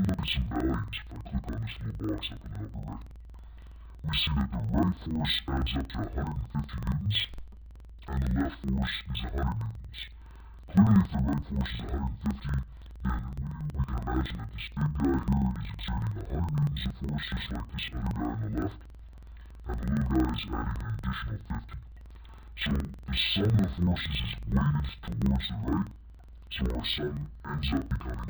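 From start to finish, interleaved audio is read as planar: each block of alternating left and right samples is split into halves, with the first half taken as left and the second as right. Each channel then plays its samples at half speed, an octave (12 semitones) low, and the pace only holds because both halves run together. Blocks last about 46.4 ms, which fits a 2048-sample block, so the sound comes out doubled and choppy, stuttering at about 21.5 Hz.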